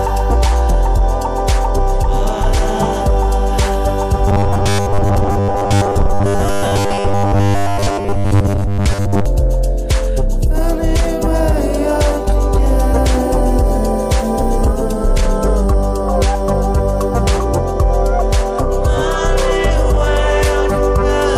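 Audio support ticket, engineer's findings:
Robotic sound from repeated short buffers, 4.28–9.26 s. Rigid metallic buzz at 100 Hz, matching a repeated 10 ms segment. Likely audio underrun, with the last buffer looped while most incoming audio is skipped. Spectrogram: evenly spaced 100 Hz harmonic stripes. Waveform: identical repeating cycles.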